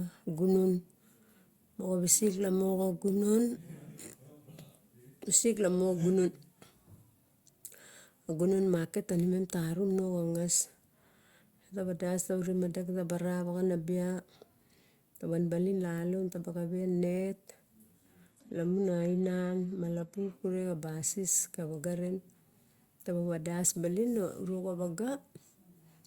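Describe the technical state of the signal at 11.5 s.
At 11.5 s the speech signal is intact, with no audible technical fault at that moment.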